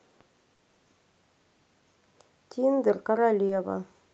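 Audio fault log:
0.55 to 0.61 s: short concealed packet loss. About 40 ms of the call arrived too late, so the decoder extended the preceding sound and crossfaded back, leaving a brief smear.
3.47 to 3.51 s: short concealed packet loss. A 20 ms gap was filled by continuing the prior signal, heard as a short wobble before real audio resumes.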